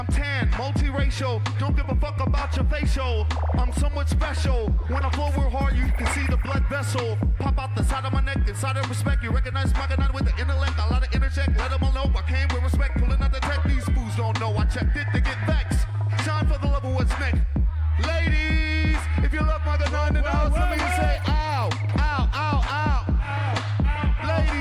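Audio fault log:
No faults detected in recording.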